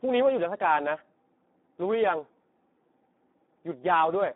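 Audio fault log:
Throughout: Speex codec damage, heavy. The speech sounds hoarse and noisy, which points to a low setting around 8 kbps, where the excitation is starved of bits. It sits in a narrow line band of about 200 Hz to 3.6 kHz, with nothing at all above 3.8 kHz.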